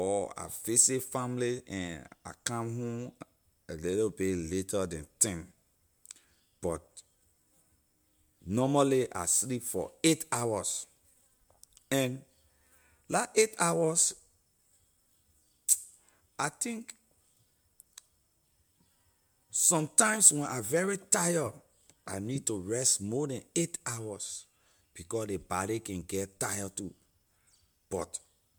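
No technical faults can be heard anywhere in this speech recording. Nothing in the sound breaks, drops out or changes character at any point.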